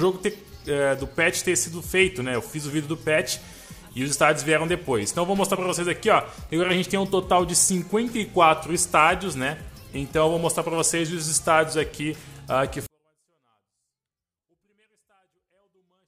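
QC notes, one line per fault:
12.86–16.07 s: 24-bit alignment error (too quiet). Level falls about 48 dB at once, yet stays clean: 24-bit samples in 32-bit words read as full 32-bit values, not distortion or dropout.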